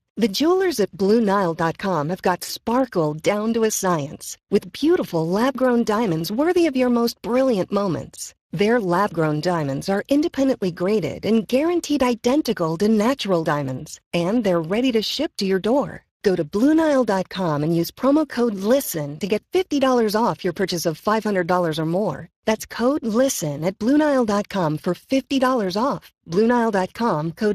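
From start to finish the speech carries a grainy, hoarse roughness, and nothing sounds above about 15.3 kHz. This is Speex codec damage, plainly audible throughout. Speex is a CELP coder: it models speech as a filter excited by a coded signal, and at this rate, which fits a bitrate of about 22 kbps, the excitation is too coarsely coded to rebuild the voice cleanly, leaving that hoarse, noisy texture.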